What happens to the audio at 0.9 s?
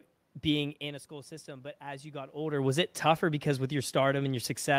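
At 0.9 s the automatic gain is rising: from 0.79 to 2.43 s it lifts level by about 4 dB after the talker moved back, so voice and room noise swell together, visible as a gradually thickening waveform envelope.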